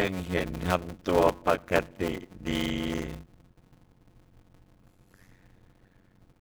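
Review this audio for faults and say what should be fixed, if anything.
There's a block size mismatch (padded) running the whole way through this speech. A steady buzz at about 91.9 Hz sits under everything, and the talking drags at 0.533 times normal speed while keeping roughly its usual pitch. That fits 256-sample blocks zero-padded into a larger read size. Match the block sizes between stages, or buffer properly instead of padding.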